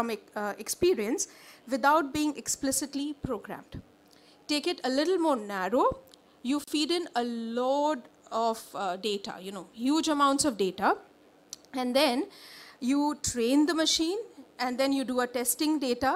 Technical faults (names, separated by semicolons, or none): gap at a join of encoded pieces